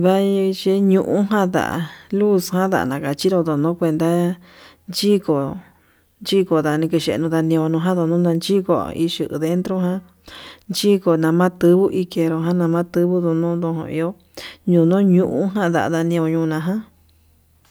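Nothing in this recording of speech stands out as a technical fault, so there's nothing to point to at any moment along the way.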